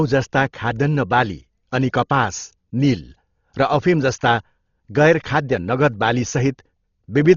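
From start to finish the speech has the heavy damage of a starved transform codec, most likely Dolby Digital compression at a very low bitrate, with the sound suggesting something near 32 kbps. With so few bits, the encoder has cut the band so that nothing reaches above 7 kHz. It has also left many frequency lines without real detail, filled instead with noise. The result is dull, muffled speech with a rough, fluttering grain clinging to its tonal parts.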